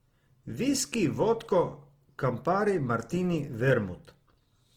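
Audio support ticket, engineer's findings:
Speech grainy and rough through the whole clip, with noise-like fizz where tonal detail should be, but little swirl and few holes. Likely Opus compression in CELT (music) mode, starved of bits, filling bands with folded or noise content. Fits around 16 kbps. Bandwidth stays full, up to about 20.2 kHz.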